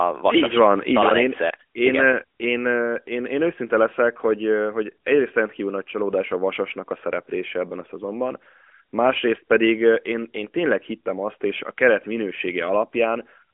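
No technical faults can be heard in this speech.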